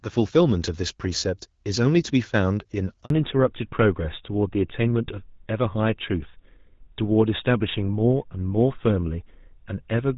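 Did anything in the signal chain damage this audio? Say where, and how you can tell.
Yes. The network stage caused a handover gap. The speech cuts out at 3.04 s and stays silent until 3.10 s, about 60 ms. The sound dies away quickly instead of fading naturally. Nothing in the codec would do that. It is what happens when the phone switches the call between networks and no speech frames arrive during the switch. Whatever was said inside those 60 ms is gone.

The codec stage then shows a fallback to narrowband. From 3.10 s to the end, nothing remains above 4 kHz. The voice turns duller and rougher. Before the gap, the band reaches near 7 kHz with only light coding damage. That fits HD Voice at about 12.65 kbit/s. After the switch, the new link carries an older narrowband codec, and the sharp 4 kHz ceiling fits GSM full rate.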